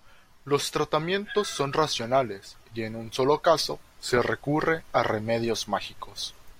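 Speech recording, no technical faults detected.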